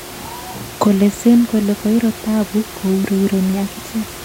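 No technical faults can be heard in this speech recording.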